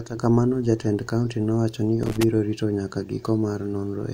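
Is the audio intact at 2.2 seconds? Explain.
No. From 2.03 to 2.23 s the speech is broken by loose connector crackle: a worn or dirty contact keeps opening and closing, chopping the signal into an irregular scratchy burst. On the waveform the span looks ragged with dropouts and spikes, and on a spectrogram it shows as broadband vertical streaks.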